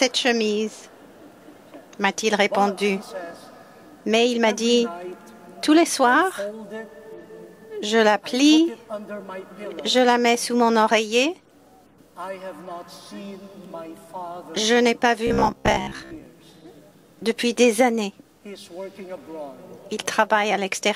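Around 15.27 to 16.26 s the audio turns into a rigid metallic buzz at about 66.7 Hz: robotic sound from repeated short buffers. It's likely the playback looping a 15 ms chunk whenever fresh audio runs late, with roughly half the material repeated.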